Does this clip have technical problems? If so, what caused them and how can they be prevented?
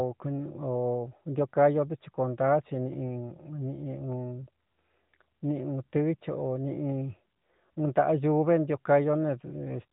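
No, there are no technical problems in this speech clip, so there is nothing to prevent. It has the sound of the AMR narrowband mobile codec, with nothing above about 3.8 kHz and only a light synthetic edge, which fits AMR-NB's highest 12.2 kbps mode.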